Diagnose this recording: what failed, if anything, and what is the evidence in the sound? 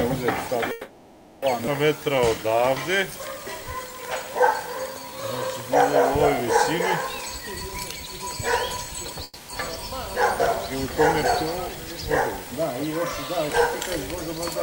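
The network and jitter buffer stage is where this goes wrong. From 0.71 to 1.45 s, and again from 9.24 to 9.52 s, the last sound hangs on as a fading buzz for about 710 ms and then 250 ms before picking up right where it stopped. That's likely a call audio freeze: packets stalled, the buffer ran dry, and the receiver filled the gap.

There's also a skip ahead at 1.66–1.70 s. Roughly half a second of audio just vanishes, and the two sides are butted together with only about 10 ms of fill. A chunk was dropped while newer audio was already queued, so playback jumped forward.

A jitter buffer slow-down runs from 1.97 to 5.17 s. The audio plays at about 92% speed with the pitch unchanged, and sounds get drawn out. The receiver was repeating pitch periods to pad in 271 ms and build back its reserve.

Going the other way, there's a jitter buffer speed-up at 7.21–8.34 s, running at 117% and trimming roughly 200 ms, then a milder one at 8.77–9.21 s at 108%, cutting a few tens of milliseconds. 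Small pitch-period slices were dropped to shed excess delay, so things sound hurried while the pitch stays put.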